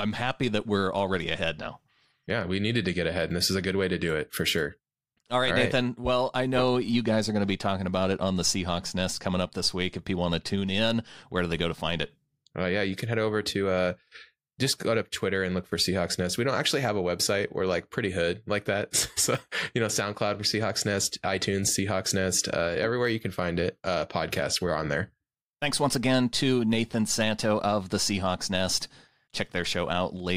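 A speech recording with nothing technically wrong that I can hear anywhere in it.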